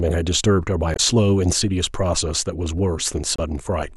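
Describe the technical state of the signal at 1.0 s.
Damaged data in a compressed stream ends right at this point, spanning 0.93 to 1.00 s. Corrupted bytes make the decoder misread frames and hunt for the next valid header, producing a brief chirp, squawk, click or short hole.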